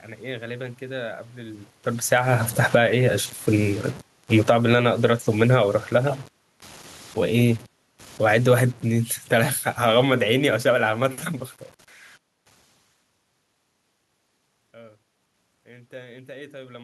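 The whole clip has a grainy, gritty edge that rides along with the speech, roughest on the quiet tails where the sound sputters between steps. That's low bit depth without dither: the signal was likely chopped down by truncation to very few bits, which fits an 8-bit path, with no noise added to smooth the rounding. The error sits roughly 30 dB under the speech and changes character with it instead of staying a steady hiss.

The level then starts pumping. Just after the talker moves around 1.5 s, from 1.98 to 2.91 s the automatic gain falling pulls everything down by about 10 dB. The control decided the input was too loud, or its background too noisy, and eased its gain off, so the speech and the room noise sink together. It happens again from 3.5 to 4.76 s, another drop of about 10 dB.

Almost straight away, from 4.67 to 5.79 s, there's automatic gain rising. The control finds the input too quiet and lifts its gain by about 6 dB over roughly a second, so the voice and the background swell back up together.

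A final, slower automatic gain falling runs from 7.36 to 11.19 s. It drags the level down by about 8 dB over nearly four seconds, a gradual sag before the talker moves again around 12.5 s.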